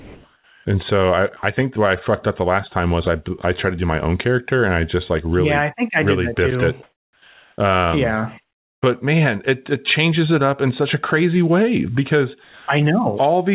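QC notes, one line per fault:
0.00–0.65 s and 6.83–7.58 s, comfort noise in place of the background: the sender likely stopped transmitting during the pauses and the receiver synthesised noise to fill them. For 650 ms, then 750 ms, the real background, which sits about 38 dB and then about 46 dB below the loudest passages, is replaced by a flat, featureless hiss that comes in about 1 dB and about 2 dB quieter, so the room tone loses its texture until speech resumes.
1.37–1.43 s and 12.44–12.68 s, sound dropped by the voice detector: the detector likely mistook wanted sound for background and halted transmission, so comfort noise was played where that sound should have been. The first gap removes 60 ms of sound and the second about 230 ms. Each is heard as a brief slide into steady noise or near silence before the sound returns. Like the rest of the clip, the fill is limited to nothing above 4 kHz, which fits a G.711 narrowband call path.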